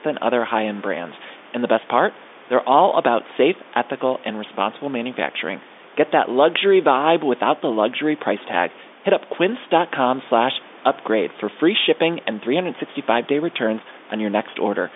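No technical faults can be heard: the speech carries a room noise about 24 dB below it and the narrow telephone band of G.711 coding, roughly 250 Hz to 3.6 kHz, as a normal phone line would.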